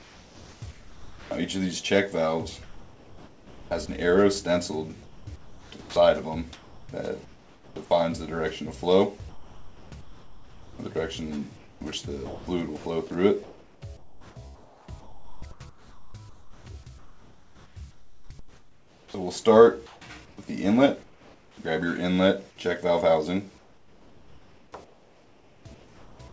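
The audio passes through a call path with nothing above 8 kHz, consistent with a wideband codec such as G.722. Comfort noise in place of the background appears at 0.00–1.31 s, 5.03–7.76 s and 23.58–26.19 s: the real background gives way to steady, featureless hiss, likely discontinuous transmission filling pauses with synthetic noise. Sound dropped by the voice detector occurs at 0.71–1.31 s and 5.81–5.96 s, where sound vanishes into that steady noise, likely because the detector mistook quiet sound for background and stopped sending. Sound chopped by the voice detector affects 2.63–3.89 s and the long stretch from 9.29 to 21.57 s: sound edges cut out repeatedly, likely the detector toggling transmission on and off.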